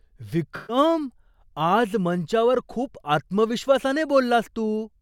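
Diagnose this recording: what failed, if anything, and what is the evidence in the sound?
AAC frame loss with concealment, codec stage: from 0.56 to 0.77 s the speech turns smeared and phasey as the decoder rebuilds missing frames from the last good spectrum.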